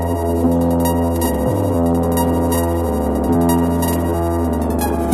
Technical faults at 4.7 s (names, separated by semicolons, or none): MP2 compression; DAB burbling